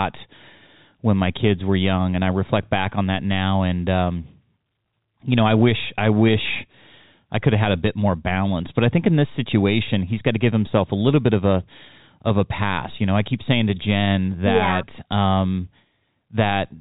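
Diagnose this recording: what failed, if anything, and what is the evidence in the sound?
Nothing has failed here: the speech comes through as ordinary G.711 telephone coding, with nothing above about 3.8 kHz and only the faint level-following hiss you'd expect from that 8-bit logarithmic format.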